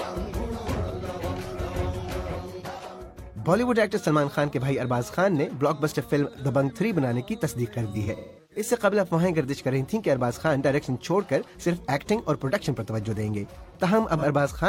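Between 7.90 and 8.65 s there is AAC frame loss with concealment. Dropouts scattered over about 0.6 s, the longest around a fifth of a second, leave the decoder re-synthesising from the last good spectrum. The result is a smeared, phasey, noisy patch, seen as blurred, striped spectral columns and flattened waveform detail. A single short loss at 14.17–14.24 s, roughly 43 ms and consistent with one lost frame, leaves a brief smudge and a narrow blurred slice.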